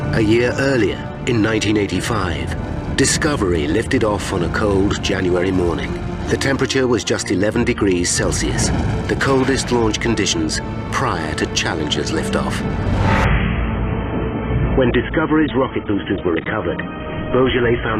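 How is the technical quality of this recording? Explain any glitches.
Quality drops abruptly in the last few seconds. From 13.24 s to the end, an adaptive stream at a lower bitrate takes over: the connection slowed and playback switched versions, which fits a fall from 96 to 16 kbit/s AAC. With no gap, the sound suddenly loses everything above 3.8 kHz and codec artefacts rise.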